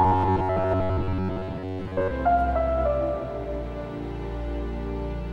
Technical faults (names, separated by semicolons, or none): robotic sound from repeated short buffers